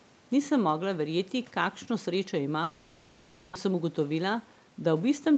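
From 2.63 to 3.57 s the speech gives way to a buzzy continuation of the last sound that fades before the talker returns, with about 600 ms of speech gone. This is most likely a long network dropout: no packets arrived, the receiver concealed the gap, and the delay shifted by roughly 300 ms.

From 3.65 to 4.72 s the speech runs noticeably hurried at an unchanged pitch, about 108% of normal speed. This is a jitter buffer speed-up: to shed the excess delay, the receiver cut roughly 100 ms of short pitch-period pieces, repeatedly, through the band-limited Opus audio, which has nothing above 8 kHz.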